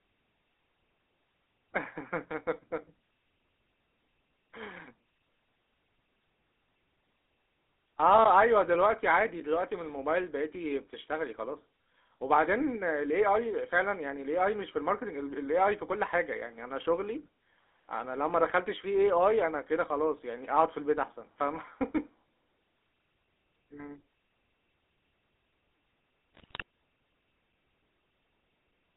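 Speech, and the whole clip has been through the GSM full-rate codec. The sound is squeezed into roughly a 300 Hz to 3.7 kHz phone band, and the voice has that buzzy, gravelly edge you get from a coarse pulse-driven vocal-tract model, which fits a 13 kbps stream. Then there's a burst of GSM bit errors from about 26.35 to 26.62 s. Corrupted filter, pitch and gain values reach the decoder, so for that stretch the speech breaks into squawks, pops and gargly level jumps, which points to a fairly heavy run of flipped bits on the link.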